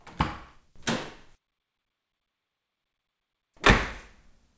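Nothing in these everyday sounds stood out on listening, beyond the call path's band limit, with nothing above 8 kHz as expected for G.722 at 64 kbps.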